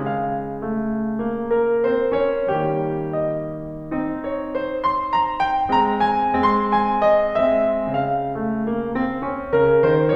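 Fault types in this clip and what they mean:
No faults detected in this music clip.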